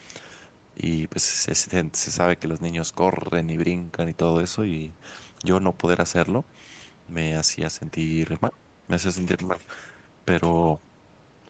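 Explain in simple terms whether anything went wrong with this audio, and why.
From 8.51 to 8.55 s the speech briefly dips, likely speech suppressed in double talk: the echo canceller turned the talker down while both sides spoke.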